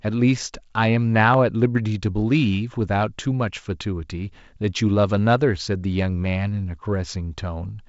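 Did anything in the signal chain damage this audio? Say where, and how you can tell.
Yes. At 1.34 s there is one sharp click, a thin vertical line across the spectrum. The waveform skips ahead by a fraction of a millisecond. These are dropped samples, likely lost at the driver or buffer stage. The G.722 coding's light hiss is separate.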